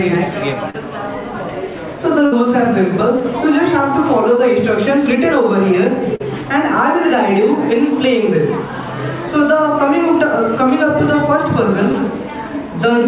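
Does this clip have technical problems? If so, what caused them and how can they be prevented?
Yes. Short concealed packet loss occurs at 0.70, 3.18, 6.16 and 11.92 s. Gaps of 40, 20, 40 and 20 ms were filled by extending the preceding sound, which appears as brief smeared, repeated patches on a spectrogram. A larger jitter buffer and forward error correction would let late or lost packets be recovered instead of concealed.

A burst of packet loss runs from 2.26 to 2.34 s, where about 60 ms went missing. The receiver held and faded the last sound, which shows as a flat, decaying band before the waveform jumps ahead. Redundant encoding, or a steadier network route with less congestion, would prevent such runs of consecutive losses.

Through all of this the call path's G.711 mu-law coding leaves nothing above 4 kHz, consistent with a 64 kbps narrowband stream.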